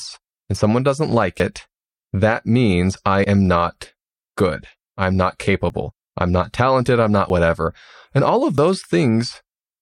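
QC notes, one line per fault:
1.4, 3.24, 5.7, 7.3 and 8.58 s: dropped buffer (overrun). Each is a sudden jump in the speech with no gap of silence. A short stretch is missing, from about 20 to 70 ms. The likely cause is samples overwritten before the program collected them.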